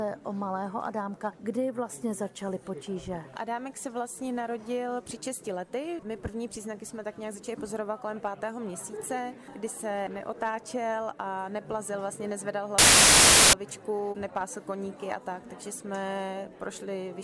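The audio carries one fault: file tags played as audio, from 12.78 to 13.53 s. For about 0.75 s, an embedded block of compressed data, most likely a cover picture, is decoded as samples, producing very loud white noise with abrupt, hard-edged onset and cutoff.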